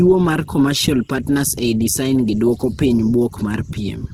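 Opus compression runs through the whole speech clip, and the damage is plainly audible. Tones sound grainy, rough and noisy rather than swirly. Bandwidth stays full, reaching about 20.2 kHz. The likely cause is the Opus music mode at a starved rate, which fits about 16 kbps.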